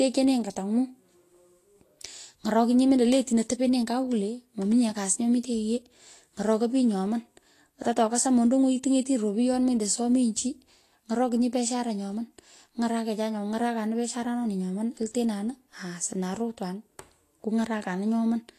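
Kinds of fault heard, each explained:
Vorbis compression: The speech has a grainy, hissy sheen through the whole clip, with consonant attacks smeared and voiced tones roughened, and nothing at all above about 14.2 kHz. That's likely a Vorbis encode at a low setting, around 36 kbps: the encoder keeps a smooth outline of the spectrum but quantises the fine treble detail so coarsely that it comes back as noise, and it trims the top end outright.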